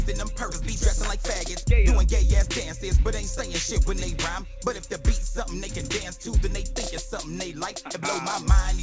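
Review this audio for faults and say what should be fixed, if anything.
At 0.52 to 0.54 s there is a skip ahead. Around 0.4 s of audio is dropped and the two sides are spliced directly with no fill, so the waveform shows an abrupt seam between mismatched shapes. To prevent it, give the jitter buffer enough headroom that a burst of late packets doesn't overflow it and force audio to be discarded.

From 1.63 to 3.38 s there is a jitter buffer speed-up. The receiver repeatedly removed short pitch-period pieces, about 50 ms in total, so this stretch plays at 103% speed without any pitch change. On a spectrogram the harmonics stay at the same frequencies while events sit closer together in time. This can be prevented by smoothing packet delivery on the network side so delayed packets don't arrive in bunches that push the buffer above its target depth.

Across the clip, the G.722 call path leaves the spectrogram empty above 8 kHz.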